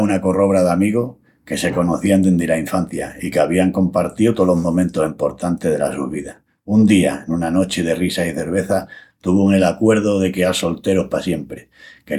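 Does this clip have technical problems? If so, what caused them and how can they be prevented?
No, this clip has no technical problems, so there is nothing to trace back or prevent.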